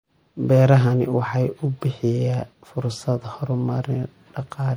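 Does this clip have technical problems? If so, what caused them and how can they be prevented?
Yes. Throughout the speech, faint detail flickers watery from frame to frame, which points to MP3 compression, likely at around 64 kbps; a plain low-pass filter would dull the sound without that swirl. Encoding at a higher bitrate, or keeping an uncompressed master, prevents it.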